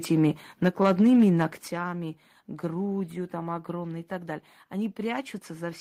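At 0.24 to 0.26 s, and again from 0.66 to 1.3 s, the loudest peaks turn harsh and crackly. Their tops are flattened. This is likely microphone overload, with peaks pushed into the converter's ceiling. The first burst exceeds it by about 1 dB, the second by about 5 dB.

At 0.68 s the whole sound drops by about 3 dB in one step. At 1.68 s it drops again, by about 9 dB. The background falls with it. This sounds like the microphone volume stepped down, a likely response to the distorted peaks.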